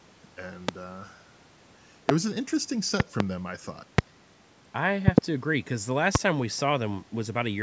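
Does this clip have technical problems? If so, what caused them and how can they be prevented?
Yes. A loud pop is present. A voltage pulse, most likely from a plug, switch, static discharge or driver glitch, entered the signal chain and produced sharp thumps about 25 dB above the speech. Single pops occur at 0.69–0.71, 2.09–2.12, 3.98–4.01 and 6.15–6.18 s, and double pops at 3.0–3.23 and 5.08–5.20 s. The speech continues beneath each pop, within the normal call-microphone band that stops at 8 kHz. To prevent these pops, secure cables and connectors, avoid switching or unplugging gear during recording, reduce static, and keep audio drivers up to date.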